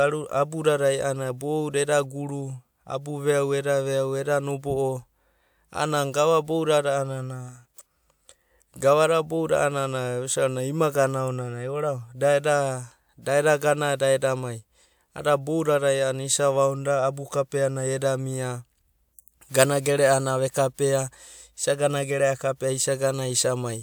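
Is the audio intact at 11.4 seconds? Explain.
Yes, the audio is intact at 11.4 seconds, with no fault to be heard at that point.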